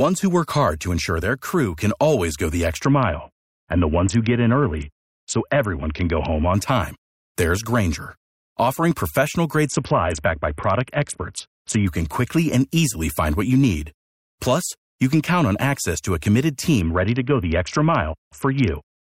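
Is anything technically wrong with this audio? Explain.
Yes. A Bluetooth SBC bit pool drop occurs three times in this speech: 2.83 to 6.54 s (after "can always go the", recovering by "time there's"), 9.66 to 11.87 s (after "offering professional", until "can quickly and easily"), and 16.81 s to the end (after "access to a committed"). Congestion on the link forced the encoder down from a bit pool of 31 to just 6, around 55 kbps, which starves the upper sub-bands and quantises the rest coarsely. The treble goes dull and a gritty, grainy noise rides on the sound until the rate returns.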